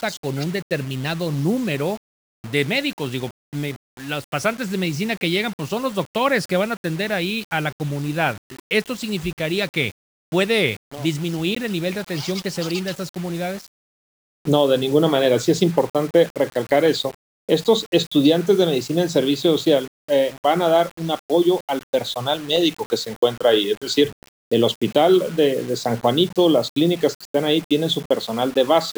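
Low bit depth without dither runs throughout, likely from 6-bit rounding: grainy distortion about 25 dB below the sound tracks it.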